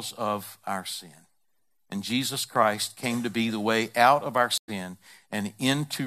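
A stream reconnect at 4.58 to 4.70 s: the connection dropped, playback fell silent for about 103 ms, and a fresh decoder picked the speech up mid-stream roughly 70 ms further on, so a short stretch of audio is skipped across the gap.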